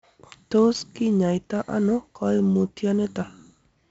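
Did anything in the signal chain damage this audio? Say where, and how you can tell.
Yes, at the codec stage: 4-bit ADPCM compression throughout. Gritty hiss rides every loud syllable, and nothing sounds above 7.7 kHz, which fits a 64 kbps stream.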